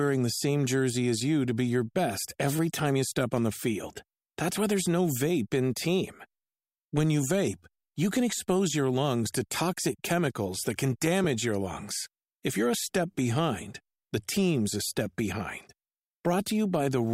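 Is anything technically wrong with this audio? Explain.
Yes. At 11.24 s, between "toxic chemicals that can" and "your lungs", there is a brief dropout of lost LE Audio frames. The 7.5 ms gap points to a single missing LC3 frame. The decoder filled the hole by repeating the previous frame's spectrum with its signs randomised, so the waveform doesn't fall silent. Instead, the speech briefly turns into a short, noisy smear where its tonal detail is lost. The light coding from the lossy compression stays subtle around it.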